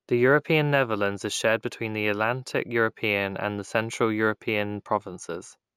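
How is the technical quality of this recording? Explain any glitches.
The recording has one fault, present for its whole length: imaging from linear upsampling. The speech was raised to a higher rate by joining adjacent samples with straight lines, which filters poorly. The sound suggests a 16 kHz original brought up to 44.1 kHz. Content near the old 8 kHz limit is dulled, and a faint mirrored copy of the spectrum sits between 8 kHz and 16 kHz, around 30 dB below the signal, adding a light metallic shimmer to sibilants.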